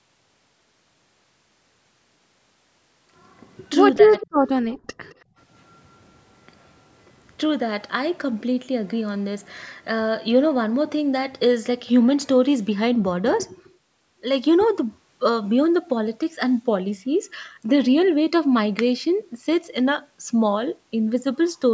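From 3.96 to 4.14 s the speech is suppressed in double talk, dipping by roughly 10 dB. The likely cause is the echo canceller ducking the talker while the far side also spoke. On a waveform this appears as a brief notch in the envelope.

Echo leak follows at 4.18–4.27 s, 4.71–4.76 s and 5.1–5.15 s. Faint copies of the voice, delayed by 216 ms, return at about −20, −30 and −35 dB, likely residual loudspeaker echo. On a spectrogram they show as ghost traces trailing the speech.

From 5.25 to 5.36 s the background is gated by the echo canceller. Room noise drops by about 22 dB, leaving a near-silent gap in the noise floor.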